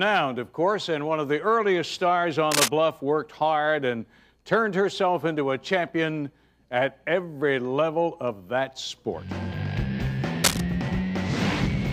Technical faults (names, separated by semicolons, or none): cable scratch noise